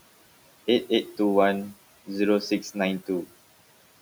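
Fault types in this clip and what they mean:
Noise suppressor artifacts, throughout the clip: a frame-by-frame gate pulls down each frequency band it judges to be steady background, by about 17 dB here. The room noise, which sits about 19 dB below the speech, drops away in the gaps between words and comes back up under the speech as soon as the talker resumes. The result is a background that pumps in step with the speaking rhythm rather than holding a constant level.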